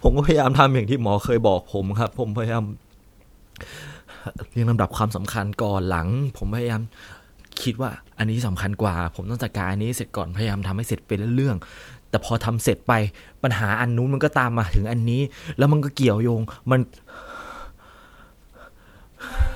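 At 2.07 s a single sharp snap sits on top of the speech, lasting only a couple of milliseconds. It is an electrical switching spike, likely from a nearby switch, motor or static discharge arcing briefly and being picked up by the audio line.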